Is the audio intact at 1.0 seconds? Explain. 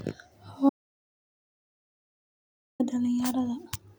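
No. At 1.0 seconds the speech has cut out to total silence, with no room tone, from 0.69 s to 2.80 s, about 2.1 s gone. This audio dropout to silence likely comes from the input being lost while the recorder kept writing silence.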